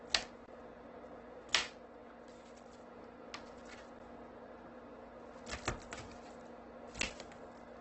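Throughout, the sound is rough, grainy and noisy, with nothing above about 8.3 kHz. This is likely heavy Opus compression in its music mode, which fits a bitrate of around 12 kbps: starved bands are filled with folded or noisy content, and the narrowed bandwidth removes the top.

From 0.46 to 0.48 s there is a brief hole, and at 7.02 s a shorter tick or dip. Each is a block of digital silence, 20 ms and about 13 ms long. The audio cut out and back without a fade.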